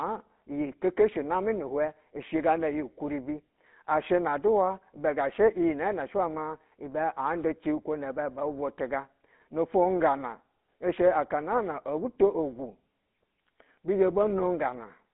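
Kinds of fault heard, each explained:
GSM full-rate codec: Throughout, the speech has a plainly audible buzzy, gravelly roughness and is confined to a band between 200 Hz and 3.6 kHz. A coarse vocal-tract model driven by sparse, regularly spaced pulses causes this, consistent with 13 kbps GSM full rate.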